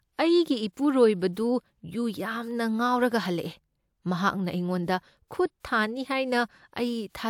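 No technical faults are audible anywhere in the recording.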